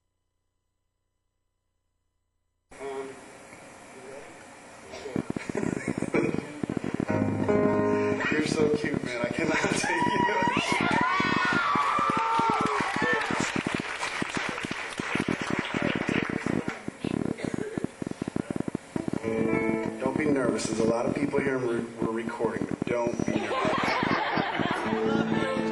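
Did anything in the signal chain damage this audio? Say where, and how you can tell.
Yes: likely analogue-wiring interference injects a train of clicks, irregular at 14.4 per second, from 5.16 s to 25.6 s, ticking about 15 dB above the sound.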